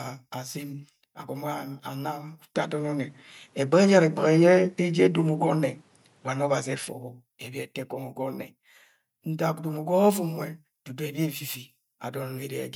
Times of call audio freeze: none

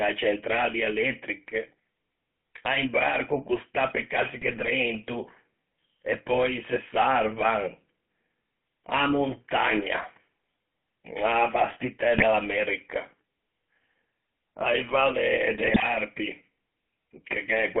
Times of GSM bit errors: 4.41-4.69, 12.14-12.23, 15.54-15.83

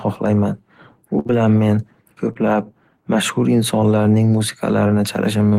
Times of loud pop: none

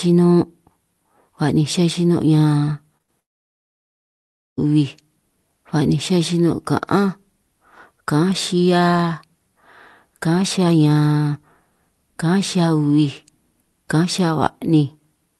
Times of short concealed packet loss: 2.97-3.01

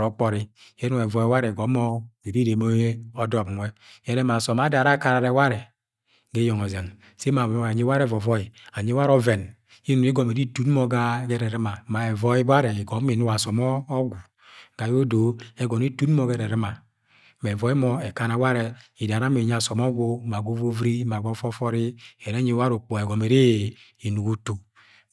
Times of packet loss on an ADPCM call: none

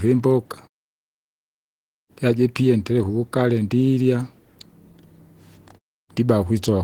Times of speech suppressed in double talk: none

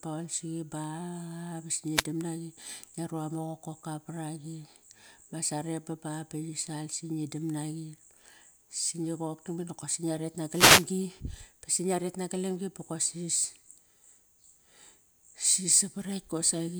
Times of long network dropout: none

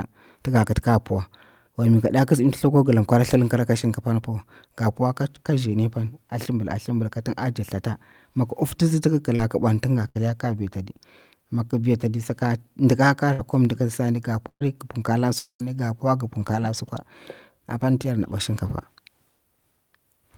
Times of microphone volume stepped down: none

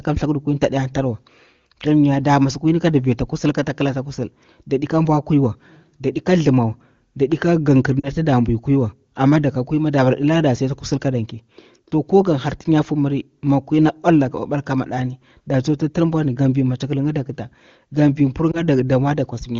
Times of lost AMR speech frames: 7.99-8.09, 18.51-18.62

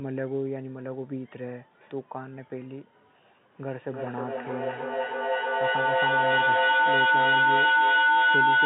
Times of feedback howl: 3.64-8.66

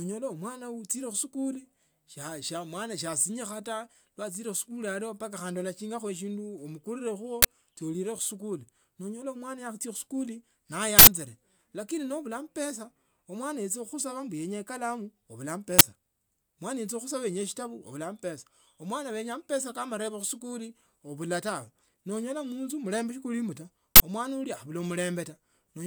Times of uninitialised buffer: 7.42-7.45, 10.99-11.07, 15.79-15.81, 23.96-24.00

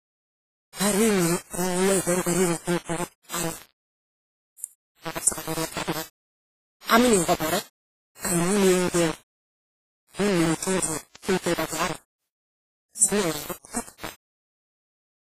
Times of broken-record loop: none

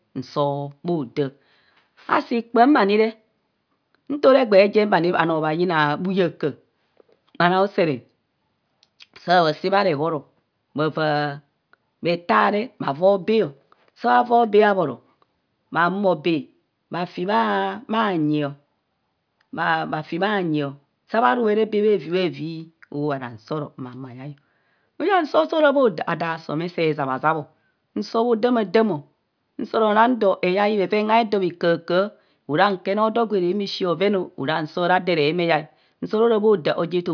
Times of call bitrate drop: none

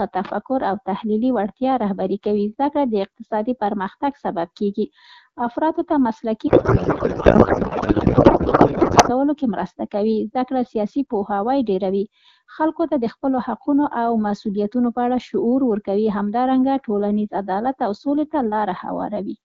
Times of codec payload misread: 6.47-9.11

